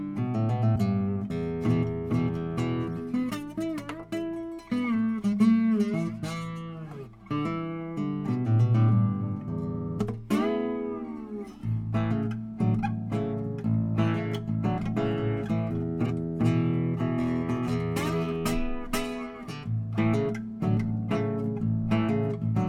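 Compressed frames skipped occur twice, at 0.75 to 0.77 s and again at 16.05 to 16.07 s. At each point, whole blocks of the encoded stream never reach the output, either because they are absent or because the decoder rejected them as corrupt. The audio lurches forward, dropping about 20 ms early on and roughly 70 ms later.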